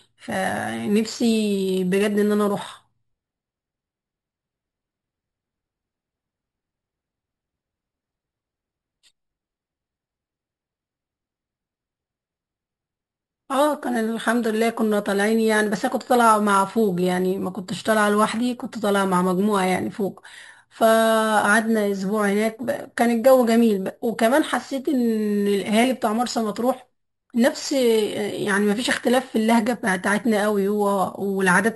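Imaging from sample-and-hold upsampling runs throughout this speech clip. A bright metallic fizz shadows every syllable, about 19 dB below the speech and rising and falling with it. The lowest mirror copy of the spectrum sits between 6 and 12 kHz and moves opposite to the speech's pitch. That points to audio originally at 12 kHz that was raised to 44.1 kHz by simply repeating samples, with no smoothing filter to remove the images.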